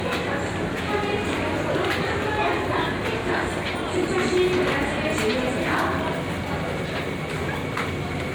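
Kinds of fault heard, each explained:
Generation loss: The audio was most likely decoded and re-encoded with MP3 around five times, at a rate that sounds like roughly 126 kbit/s. Each pass quantised the signal again on a shifted frame grid, so the errors compounded. Throughout the clip the sound is swirly, smeared and hollow, more degraded than a single encode at that bitrate would leave it. Attacks are blurred, and nothing is present above 20 kHz.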